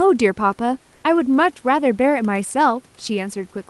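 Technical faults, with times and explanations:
0.95–1.03 s, comfort noise in place of the background: for about 80 ms the room's background, roughly 40 dB below the loudest speech, gives way to a smooth, steady hiss about 2 dB off in level. This is likely Opus discontinuous transmission: the sender stopped sending during the pause, and the receiver filled the gap with synthetic noise. A spectrogram shows the textured background becoming a uniform, featureless band, and the waveform shows a slight level step at each edge.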